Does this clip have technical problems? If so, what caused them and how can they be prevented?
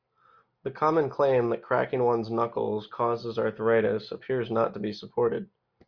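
No, nothing in this speech clip stands out as a technical problem, so there's nothing here that needs preventing.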